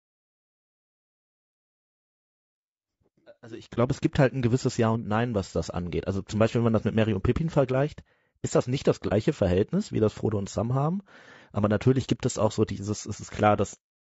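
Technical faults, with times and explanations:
Throughout: low-delay AAC compression, likely AAC-ELD at a low bitrate near 32 kbps; short frames blur pitch harmonics, leaving the speech rough and grainy with noise between harmonics.
3.74 to 3.78 s and 9.08 to 9.13 s: AAC frame loss with muting, one lost frame of about 30 ms each, before "es gibt halt ein" and after "ist das nicht das"; overlapping windows fade out and in, giving brief dips, unlike a hard dropout.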